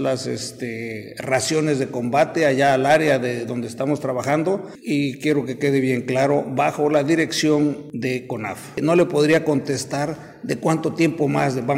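From 2.16 to 3.14 s there's hard clipping. The level runs about 6 dB past what some stage in the chain can pass, so every peak gets sliced off flat. Those squared-off tops throw harmonics way up the spectrum, and you hear it as a gritty distortion on the peaks. The same thing happens again from 8.90 to 9.51 s, also about 6 dB over, with the same gritty edge.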